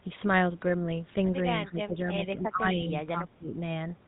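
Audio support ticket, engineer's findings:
Buzzy, gravelly roughness throughout, nothing above 3.8 kHz. GSM full-rate codec: pulse-driven vocal-tract model, fits 13 kbps coding, plainly audible damage.

1.65–3.56 s: speech dips, roughly 15 dB down, around 1.5 s total. Likely speech suppressed in double talk by the echo canceller.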